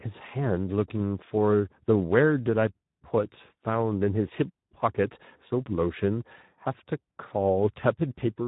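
From start to finish the speech sounds hoarse and grainy, and it is dull, with nothing above 3.8 kHz. This is Speex codec damage. The CELP coder has too few bits to model the excitation accurately, so voiced sounds take on that rough, noisy texture. The plainly audible degradation and narrowband ceiling point to a low-quality setting, roughly in line with an 11 kbps stream.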